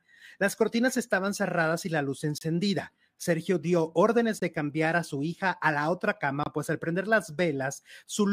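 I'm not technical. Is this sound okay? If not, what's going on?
No. The speech has three brief holes of silence, a fault called a gap between stream segments. They fall at 2.38 s right after "cerradas y la luz", at 4.40 s between "dio órdenes" and "de cambiar a su", and at 6.43 s between "hija a la otra" and "pues al prender". Each lasts about 23 to 28 milliseconds. The audio arrives in two-second pieces whose timing doesn't line up exactly, so the player fills each small mismatch with silence. Nothing is cut out, but you hear a hard-edged dropout every two seconds.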